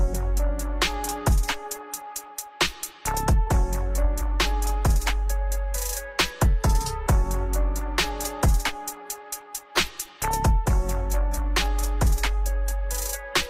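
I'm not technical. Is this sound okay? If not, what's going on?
Yes, nothing is wrong with this sound.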